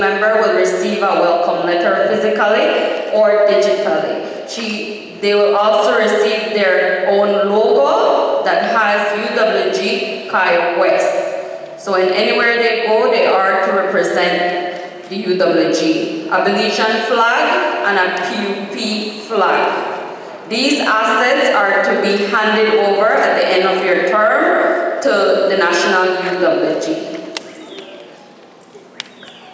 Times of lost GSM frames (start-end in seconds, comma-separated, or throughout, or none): none